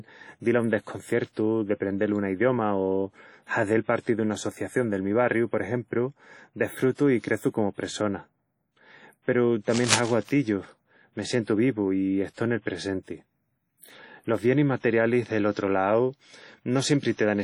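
Throughout, the speech carries heavy transform-codec damage: ringing, washy tone and a hiss that swells and sinks with the signal, likely WMA compression at a low bitrate around 32 kbps. On a spectrogram, weak components drop out as gaps and blocky smears, with nothing above 21 kHz.

From 6.93 to 6.98 s comes pre-echo. A sharp attack near the end of a coding block let the quantisation noise spill about 46 ms ahead of it, so a brief hiss leads in and the onset sounds smeared. The waveform shows a noisy ramp before the transient, and the spectrogram shows a broadband haze.

From 9.69 to 10.36 s, dense, uneven bursts of scratching and rustling sit over the speech, only a little below its level. This is likely cable scratch noise from a moving connector or control. It appears as ragged broadband streaks on a spectrogram and as jagged spikes riding on the waveform.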